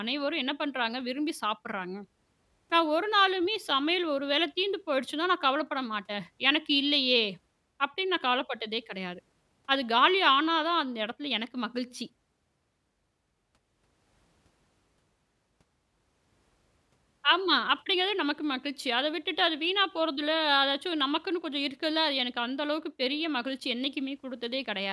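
No technical faults can be heard anywhere in this recording, with the signal staying continuous and steady throughout.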